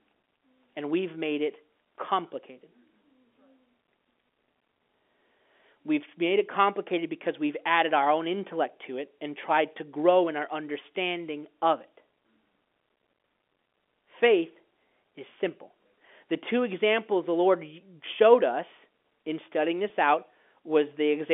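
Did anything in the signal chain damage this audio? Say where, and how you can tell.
Yes. At 19.89 s, right after "showed us in studying", there is packet loss with pitch repetition on the network. A brief buzzy hold replaces the lost audio, which fits a single 10 ms packet being concealed by repeating the last pitch period.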